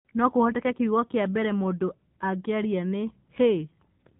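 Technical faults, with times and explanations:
Throughout: AMR narrowband mobile codec. The speech stops near 4 kHz and is rebuilt from a vocal-tract model driven by a few pulses per short subframe, which gives a plainly audible buzzy, synthetic edge. The damage fits a low AMR-NB mode around 7.4 kbps.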